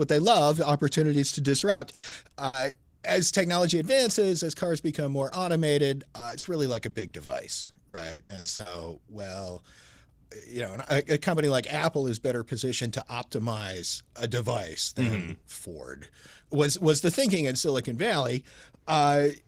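From 1.59 to 2.77 s the speech breaks up with repeated packet loss, which gives it a robotic sound. Short holes open one after another, the longest about 120 ms. Each is patched by stretching the last sound, so roughly a third of the stretch is filler. The result is choppy. A denser run follows from 6.19 to 8.67 s, with many brief gaps up to 80 ms and about 28% of the span concealed.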